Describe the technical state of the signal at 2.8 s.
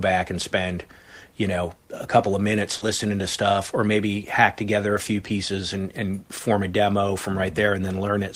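At 2.77 to 2.83 s, just after "a couple of minutes", about 40 ms of the speech stream arrived too late to decode, and the receiver concealed the gap by extrapolating the preceding sound before blending back in. This short concealed packet loss leaves a brief smeared wobble before "to stuff or maybe".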